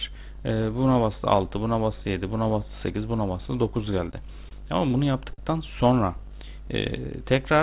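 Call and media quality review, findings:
Short stalls from late packets, four in a row: 4.11–4.15 s, 4.49–4.53 s, 4.89–4.93 s, 5.33–5.40 s. Symptom is a held, slightly buzzy sound, not a gap. Jitter buffer underrun; the receiver stretches the last audio for 20, 20, 16 and 48 ms, then resumes from the same point. Unlike packet-loss concealment, no content is skipped; each stall adds its length to playout delay. The audio is band-limited at 4 kHz, which fits a G.711 narrowband call path.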